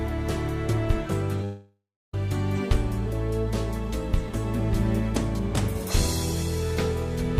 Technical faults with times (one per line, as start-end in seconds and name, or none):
1.42 short concealed packet loss
1.44-2.14 long network dropout